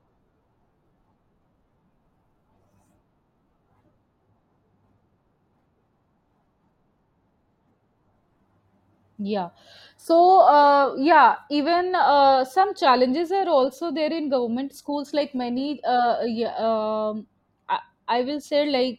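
Nothing stood out on listening to the speech recording.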